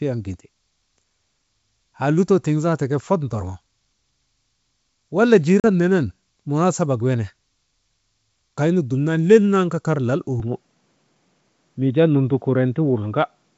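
At 5.60 s the speech drops into a hard-edged gap lasting until 5.65 s, about 40 ms, which fits two lost packets on an ADPCM call. Because ADPCM codes each sample as a difference from a prediction, the receiver's adaptive predictor and step size lose track of the sender's state across the gap. When the speech resumes, it comes back slightly distorted, and settles over the next few tens of milliseconds as the decoder realigns.

From 10.40 s to the end the band abruptly narrows, with nothing above 3.8 kHz. Up to that point the wideband G.722 path carries speech clearly to around 7 kHz. After the change the sound is duller and boxier. There is no silence at the transition and no noticeable level change, but a faint new noise floor appears, roughly 50 dB below the speech. The cause is likely the input being switched to a poorer device, such as another microphone or a headset in its call profile.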